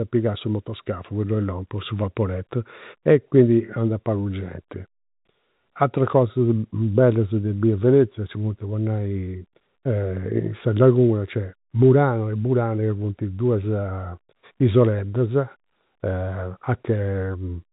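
No technical faults can be heard in this speech recording, which carries the narrow sound of G.711 telephone coding, with nothing above about 3.8 kHz getting through.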